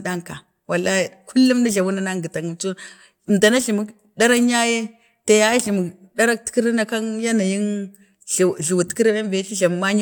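Listening to the speech recording turned up nothing that stood out as a technical problem.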